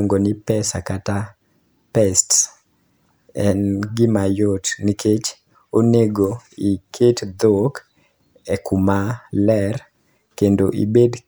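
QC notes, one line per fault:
Nothing stood out on listening to this speech recording.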